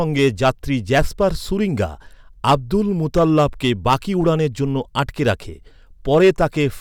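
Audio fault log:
0.18–0.49, 0.94–1.24, 2.47–2.76, 3.17–4.29, 4.99–5.31 and 6.13–6.63 s: hard clipping. Speech peaks overrun a stage by about 4 to 8 dB and are flattened, adding harsh high harmonics. It is worst at 3.17–4.29 s.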